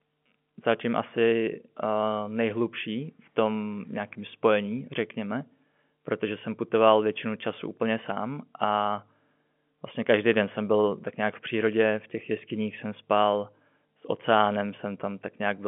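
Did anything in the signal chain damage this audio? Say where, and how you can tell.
No, nothing in the chain damaged this speech.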